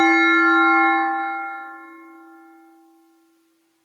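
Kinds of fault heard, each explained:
Gain pumping: The level swings by something like 15 dB throughout, most likely because the input gain sits far too high and a fast limiter or compressor clamps down on each loud sound, then lets go. Loud and soft parts end up squashed together. On a waveform the envelope looks flattened. On a spectrogram the top edge sits near 12 kHz from the call codec.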